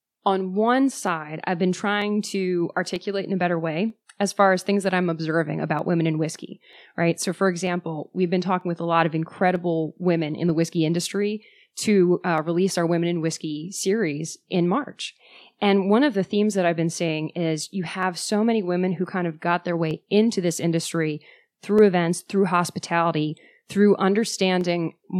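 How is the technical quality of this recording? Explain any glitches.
The recording is marred by a steady train of clicks running through almost the whole speech clip.

Clock drift buffer slips occur from 0.13 s to 24.61 s, repeating every 0.94 s, about thirty in all. The likely cause is two devices on independent clocks disagreeing by roughly 400 parts per million, so the buffer between them drifts until a block of around fifteen samples is dropped or repeated. Each slip is heard as a brief tick in the speech, recurring at that regular interval.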